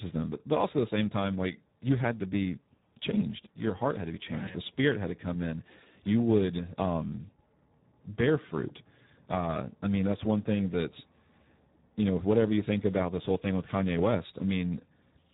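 From start to finish the speech has heavy Speex codec damage: hoarse, noisy and edging toward robotic, with nothing above 3.8 kHz, which fits a starved bitrate around 8 kbps.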